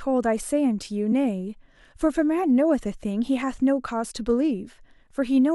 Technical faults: compressed frames skipped

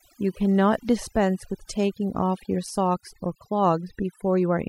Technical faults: overdone noise removal

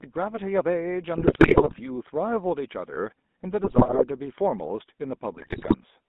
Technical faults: GSM full-rate codec; GSM bit errors

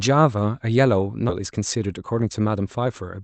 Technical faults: skip ahead; jitter buffer speed-up

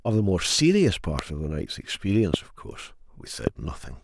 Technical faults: loud pop

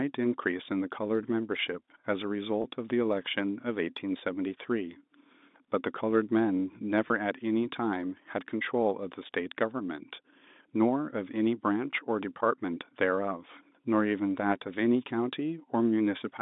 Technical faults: packet loss with pitch repetition

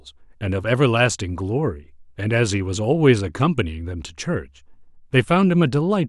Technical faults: none

